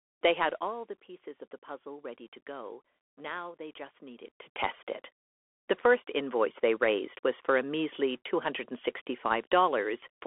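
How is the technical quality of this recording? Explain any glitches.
The recording has two faults: narrowband headset coding throughout, and one brief zipper-noise burst.

Throughout, the speech passes through a Bluetooth CVSD headset codec, a one-bit delta modulator whose steps fit a 64 kbps link. The band is held to about 300 Hz to 3.4 kHz, with nothing above 3.8 kHz, so sibilants turn scratchy and a granular hiss sits beneath the voice.

From 4.22 to 4.58 s, just after "they just", a level change of roughly 15 dB is applied in unsmoothed steps, around a hundred each second. That is zipper noise: every jump leaves a tiny click, heard as a rapid ticking riding on the speech while the gain moves.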